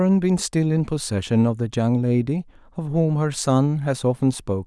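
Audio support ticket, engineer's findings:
Engineer's findings: no audio fault found in the speech clip on this ticket.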